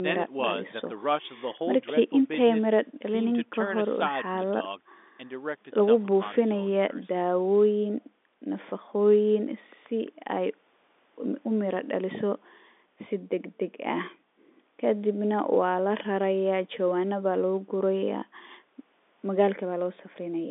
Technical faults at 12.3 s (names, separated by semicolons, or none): none